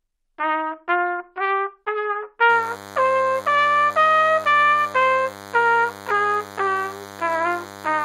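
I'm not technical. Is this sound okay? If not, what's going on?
No. From 2.49 s to the end there is a thin, steady buzz under the sound. That is DECT cordless phone buzz: a nearby cordless phone's radio pulses 100 times a second.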